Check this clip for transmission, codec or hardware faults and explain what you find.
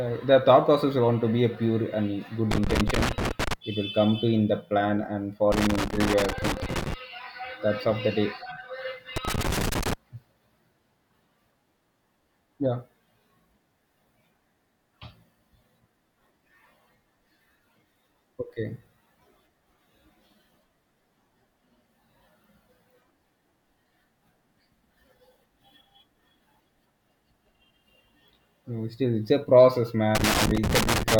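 A worn or dirty contact in the cable or connector is making and breaking as it moves, producing loose connector crackle in four bursts of this speech: 2.51–3.53 s, 5.52–6.94 s after "in the plan and", 9.16–9.93 s, and 30.15 s to the end after "still it's a process". Each intermittent contact chops the signal, and any DC on the line adds pops, so the speech is interrupted by irregular scratching crackle.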